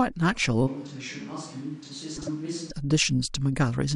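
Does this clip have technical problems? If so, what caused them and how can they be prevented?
Yes. From 0.69 to 2.69 s the speech suddenly turns roomy and hollow, loses bass, drops about 10 dB in level, and picks up background noise roughly 25 dB below the speech. Both edges are abrupt. This is likely a switch to a distant microphone after the close microphone's signal dropped out. A plain gain drop would be quieter but not reverberant, and a low-pass filter would dull the sound without adding room. To prevent it, monitor and back up the close microphone so the mix never falls back to a camera or room capsule.

From 2.16 to 2.29 s, inside that stretch, the speech briefly flutters and garbles. The cause is frames out of order: two adjacent blocks of about 52 ms each, which points to two-frame runs, were decoded in swapped order, so the halves of that short passage play back exchanged. Unlike packet loss or a dropout, nothing goes silent and no time is lost, because the audio is only rearranged. 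To prevent it, use a transport or jitter buffer that reorders frames by sequence number before decoding.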